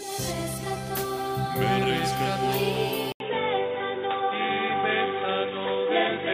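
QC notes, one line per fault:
3.12 s to end, input switched to a poorer device: after an 80 ms gap, dull and boxy with nothing above 3.8 kHz, faint new background noise; likely a narrower-band microphone.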